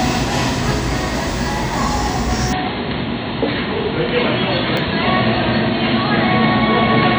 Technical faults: input switched to a poorer device; Bluetooth stutter

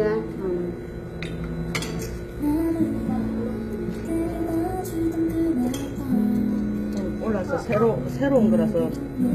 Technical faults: HE-AAC compression

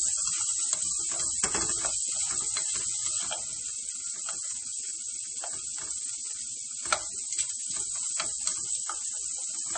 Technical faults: MP3 compression

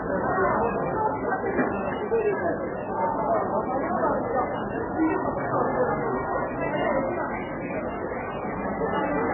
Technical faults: hard clipping; MP3 compression

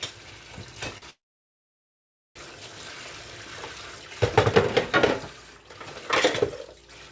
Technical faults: short stall from a late packet; call audio freeze

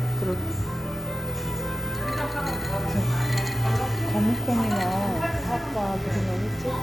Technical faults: mains buzz

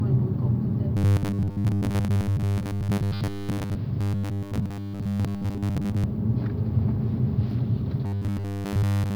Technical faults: robotic sound from repeated short buffers

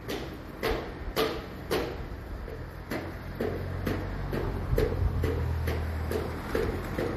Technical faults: transcoding between lossy codecs

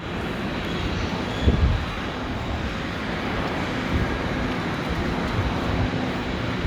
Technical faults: lost LE Audio frames

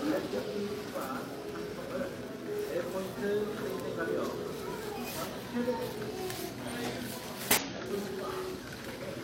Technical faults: damaged data in a compressed stream

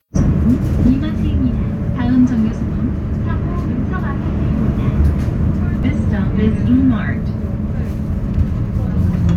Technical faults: damaged data in a compressed stream

